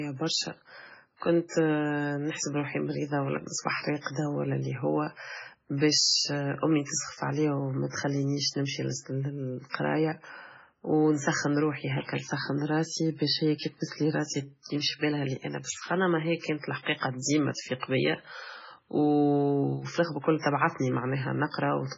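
Heavy MP3 compression damage runs through the whole speech clip. Nothing comes through above about 7.7 kHz, so the top end is simply gone. The remaining band has that watery, swirly quality you get when weak frequency lines keep dropping in and out from frame to frame, and s sounds turn chirpy and metallic. The damage is severe enough to suggest the audio was likely squeezed through an MP3 encoder at something like 16 kbps.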